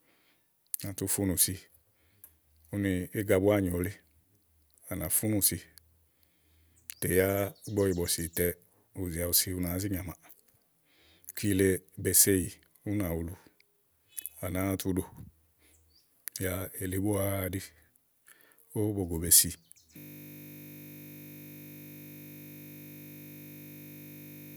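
At 19.98 s, just after "be si", a system hang loop takes over and lasts to the end. The system froze while the hardware kept replaying one 20 ms buffer, producing a steady 50 Hz buzz. Unlike mains hum, it repeats the frozen audio's own timbre exactly.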